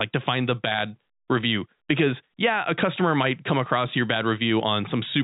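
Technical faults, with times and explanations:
No technical faults: the speech carries the expected G.711 telephone coding, band-limited to nothing above 3.8 kHz.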